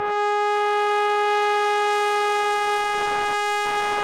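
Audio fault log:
Nothing stood out on listening to this music clip.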